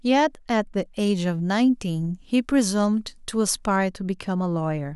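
From 0.99 to 3.76 s the speech has pre-emphasis left on: a treble lift matching the CD 50/15 µs curve was never undone on playback, leaving highs about 8 dB above 1 kHz at 10 kHz. The result sounds thin, bright and sibilant.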